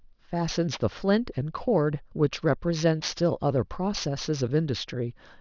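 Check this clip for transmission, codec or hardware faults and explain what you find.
One fault is present. Aliasing runs throughout: downsampling from 24 kHz to 12 kHz without filtering folds energy above 6 kHz back down, roughly 15 dB below the speech, leaving sibilants gritty and metallic.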